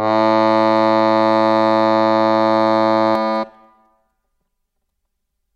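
From 3.15 s until the end, the music turns hollow and phasey. This is channel delay (comb filtering): one channel runs roughly 5 ms late, and summing to mono cuts notches from around 100 Hz upward at even spacing.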